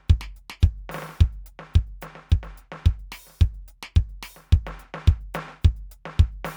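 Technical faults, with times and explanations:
No technical faults detected in this music clip.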